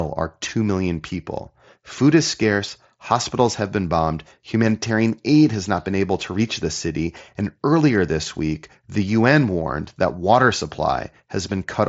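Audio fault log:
No fault to log for this audio.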